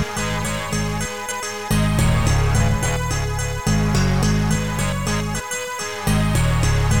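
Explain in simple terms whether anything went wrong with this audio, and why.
Two brief glitches come from damaged data in a compressed stream, at 1.30 s and from 5.39 to 5.41 s. Corrupted bytes confuse the decoder, which loses its place and spits out a short chirp, squawk, click or brief hole while resyncing.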